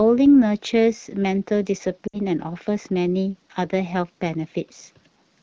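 From 2.07 to 2.19 s, lost AMR speech frames: the decoder stretched the last good pitch and vocal tract settings with falling gain. The sound smears and fades quickly, unlike an abrupt digital dropout. About 60 ms is lost, fitting three consecutive frames in this wideband stream.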